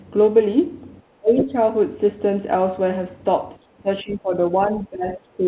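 From 1.2 to 1.53 s the speech sinks sharply, by roughly 25 dB at its deepest, with about 300 ms of it pulled down in pieces. This is speech suppressed in double talk: the other end was likely talking at the same moment, and the echo canceller, unable to tell this talker from its own loudspeaker echo, turned everything down. The same dipping returns, shallower at around 15 dB, from 3.82 to 4.33 s (about 400 ms affected) and again from 4.54 s to the end of the clip.

Inside the first dip, from 1.38 to 1.44 s, a brief scrap of a second voice surfaces, roughly 10 dB below the talker. This is the other side's voice leaking through: the far end's audio, played on this device's loudspeaker, was likely not fully cancelled before reaching the microphone. Throughout the clip nothing is present above 4 kHz, the narrowband ceiling that points to a G.711-type telephone codec on the call path.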